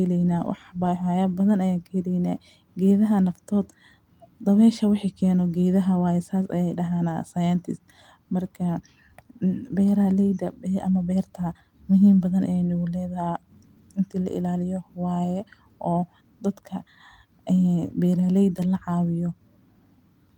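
No technical fault can be heard anywhere in the speech, and the signal stays steady and intact throughout.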